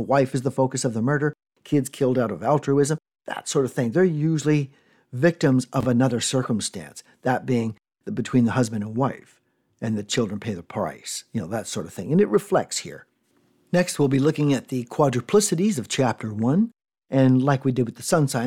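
A speech clip with a brief garbled stutter between 5.81 and 5.85 s, right after "usually victims" and just before "another circumstance that being", where the sound jumps instead of flowing on. This is chunks out of order: one chunk of about 23 ms arrived one chunk late and played after its successor. Nothing is missing, but the swapped order leaves three hard joins.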